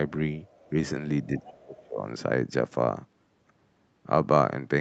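A faint second voice sits under this speech clip from 1.23 to 1.47 s, about 20 dB below the main talker, and a shorter scrap returns at 1.75 to 1.8 s, about 30 dB down. This is the other side's voice leaking through, likely because the far end was playing on a loudspeaker and the echo canceller left part of it in the microphone signal. Overlapping that, from 1.28 to 2.04 s, the talker's own level sinks for most of the stretch, dropping by roughly 25 dB at its deepest. This is speech suppressed in double talk, likely caused by the canceller failing to tell the near voice from the loudspeaker echo while both were active, so it attenuated everything together. The band stops at 8 kHz, which fits the call's microphone processing and its Opus coding.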